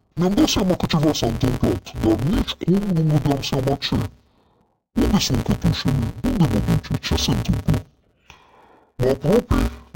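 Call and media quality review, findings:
Interleaved audio read as planar, entire clip. Playback or format-conversion stage treats alternating left/right samples as two contiguous halves per block. Blocks about 5.8 ms, which fits a 256-sample block. Each half plays at half speed. Speech sounds dull and robotic, buzzing at 172 Hz, with no clear octave drop. Pace unchanged.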